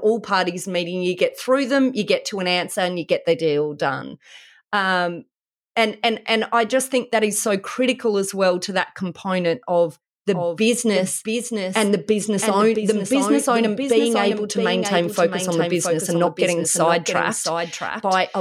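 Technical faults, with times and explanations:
10.33–18.40 s: doubled audio track. After "to that component of", a dry, somewhat quieter copy trails about 0.7 s behind. Likely a slower second capture path.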